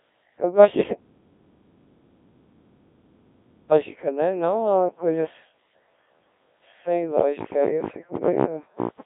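Throughout, the speech carries Codec 2 vocoder damage. It is rebuilt from sine waves and a spectral envelope, so it sounds buzzy and robotic rather than merely muffled, with nothing above 3.7 kHz, which fits a rate near 1.3 kbit/s. From 0.95 to 3.72 s, an audio dropout to silence leaves 2.77 s of silence with no room tone, unlike a fade or a gate. The likely cause is a lost input that kept being written as silence.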